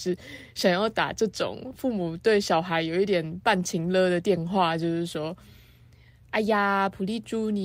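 Nothing wrong turns up in this speech recording at any point, so there's no fault to walk through here.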